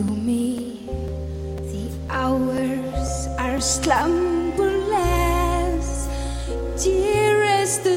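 From 0.08 s to 3.58 s, periodic USB or driver dropouts occur: something blocks the audio path every 0.5 s, and each time a few milliseconds of audio are replaced by silence. The result is a steady series of small ticks, heard only where signal is present.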